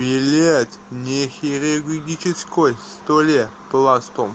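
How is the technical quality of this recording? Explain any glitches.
No glitches can be heard in the speech, with faint room noise sitting about 43 dB below it and the WebRTC call path's Opus coding limiting the audio to content below 8 kHz, as expected for a call.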